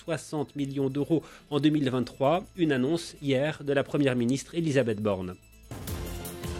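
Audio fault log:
0.14–6.54 s, clock slip clicks: a faint, evenly spaced ticking recurs about every 0.15 s, roughly fifty ticks across this span. Each tick is a single-sample discontinuity, likely from two devices running on unsynchronised clocks that differ by something on the order of 150 ppm. Each time the drift adds up to a whole sample, one sample is dropped or repeated. The steady spacing reflects that constant clock mismatch.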